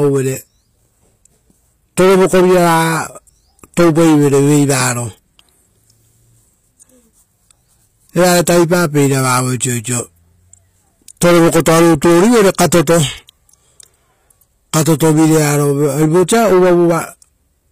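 Speech, with HE-AAC compression audible throughout. The treble sounds synthetic, and s sounds turn gritty and lispy. Nothing reaches above 15.4 kHz. This is likely spectral band replication rebuilding the top from copied lower bands, which fits a low bitrate near 24 kbps.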